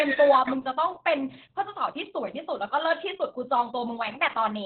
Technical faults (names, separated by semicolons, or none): Opus voice compression